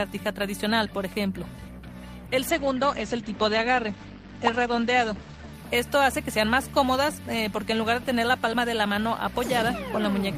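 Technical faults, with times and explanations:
2.51–5.61 s, call bitrate drop: the bandwidth estimate fell and the encoder was starved of bits, which fits a fall from about 32 to 13 kbps, so coding turns coarse and the top end narrows from 20 kHz to 8 kHz, leaving the sound rough and muffled for roughly 3 s.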